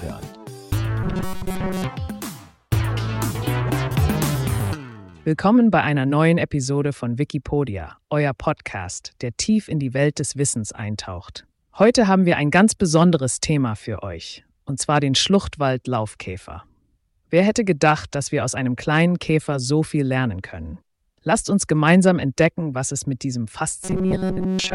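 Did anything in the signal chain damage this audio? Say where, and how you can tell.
Yes. From 1.04 to 1.84 s, and again from 23.83 s to the end at 24.75 s, the sound turns into a rigid, metallic buzz locked at 188 Hz that only loosely follows the underlying audio. This is robotic sound from repeated short buffers, likely at the driver or buffer stage. New audio arrived too seldom, so a chunk of about 5.3 ms was replayed over and over, imposing the fixed 188 Hz pitch while most of the real audio was skipped.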